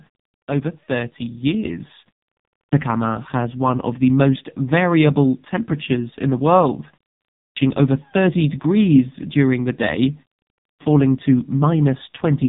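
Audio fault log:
Throughout: AMR narrowband mobile codec. Nothing above about 3.8 kHz survives, and heavy coding damage makes the speech buzzy and synthetic, which fits AMR-NB's 5.15 kbps mode. So few pulses per subframe drive the vocal-tract model that the excitation sounds coarse and mechanical.
1.65 s: microphone volume stepped up. Speech and background jump together by about 6 dB in one step, as the input gain on the capture device was raised abruptly rather than ramped.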